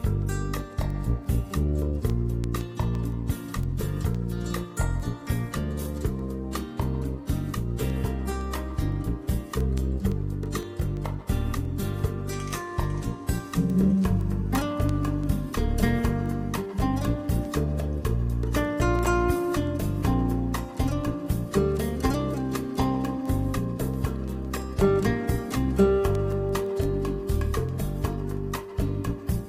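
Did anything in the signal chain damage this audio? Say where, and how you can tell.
Yes. The damage happened at a digital interconnect between devices, where a receiver was running on its own clock rather than locking to the sender's. The result is word clock ticks from 0.22 s to 29.39 s, at roughly seven per second. Each clock slip drops or repeats a single sample, which points to a mismatch of around 150 ppm. On a spectrogram these show as evenly spaced thin vertical broadband lines. On the waveform each one is a short glitch where a few samples are misread.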